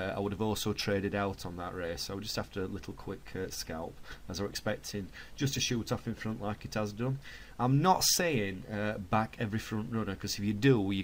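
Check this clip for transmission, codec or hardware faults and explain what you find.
One transmission fault is present: a call bitrate drop from 2.75 to 7.13 s. The sound turns rough and watery, consistent with the encoder falling from about 64 to 28 kbps and coding more coarsely. On a spectrogram, detail looks smeared and blotchy, worst for about 3.1 s.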